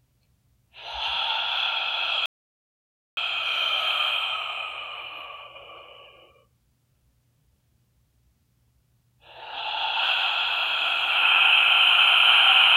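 A recording of sounds that cuts out abruptly at 2.26 s and stays completely silent until 3.17 s, when it returns mid-flow. The gap holds no room tone or background at all, just silence, so about 0.91 s of the scene is simply missing. This is an audio dropout to silence, likely caused by the input being lost for that moment through a disconnect, failed link or brief mute while the recorder kept writing silence.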